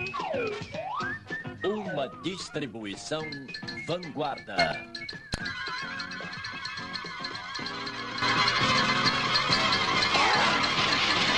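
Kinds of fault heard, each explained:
Sudden gain jump: at 4.58–4.72 s and from 8.22 s on, sound and noise floor leap together by about 12 and 10 dB, likely an unramped digital gain change.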